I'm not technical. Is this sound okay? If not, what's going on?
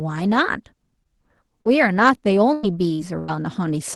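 No. Between 1.03 and 3.38 s the speech breaks up with repeated packet loss (robotic sound): five short dropouts, the longest about 97 ms. The call software papers over each hole by stretching the last sound, so it comes out choppy and robotic.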